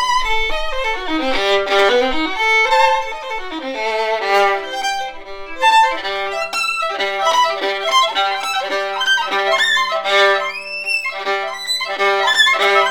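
No technical faults can be heard anywhere in the clip. Nothing in the sound points to a break, distortion or other playback problem at any point.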